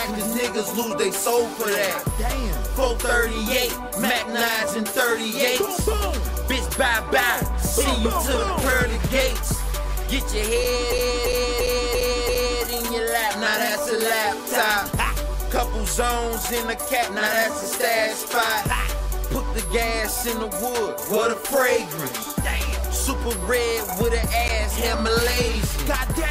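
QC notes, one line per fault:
10.92–12.63 s: system hang loop. One 341 ms piece repeats exactly five times at 2.93 Hz while playback is frozen, which fits a 16384-sample ring buffer.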